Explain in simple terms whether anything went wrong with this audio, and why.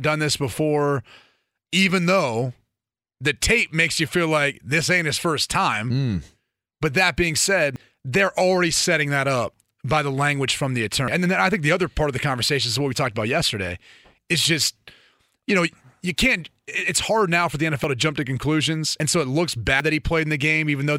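The recording software likely fell behind, letting the hardware overwrite audio before it was saved, a dropped buffer (overrun). At 7.76 s, 11.08 s (after "the language from the"), 17.84 s, 19.0 s and 19.8 s (after "so it looks"), the sound jumps ahead, losing up to about a tenth of a second each time.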